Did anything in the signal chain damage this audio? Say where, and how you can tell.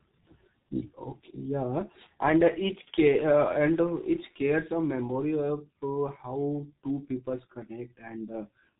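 Yes, at the codec stage. The whole speech clip carries G.723.1 codec damage: nothing above 3.8 kHz, a muffled, hoarse tone and smeared consonants. The coarse 30 ms frame modelling and slow parameter updates fit a very low bitrate near 6.3 kbit/s.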